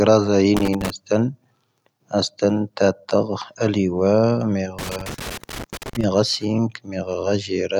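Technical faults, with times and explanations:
0.57 to 0.90 s and 4.79 to 6.04 s, loose connector crackle: a worn or dirty contact somewhere in the signal chain is intermittently losing and regaining connection, so the audio path is chopped on and off many times in quick succession. The speech is overlaid with an irregular scratchy crackle, a brief burst of about a third of a second early on and a longer run of about 1.25 s near the end.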